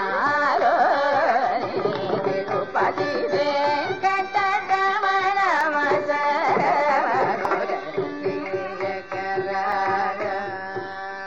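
Three short ticks land at 5.61 s, 7.45 s and 9.72 s: brief dropouts where the sound vanishes into a block of digital silence and snaps back with no fade. The first hole lasts about 1.45 ms, which fits a 64-sample block. The two later holes last 2.9 ms, which fits 128 samples. Output blocks that were zero-filled because they weren't ready in time would leave exactly this kind of gap.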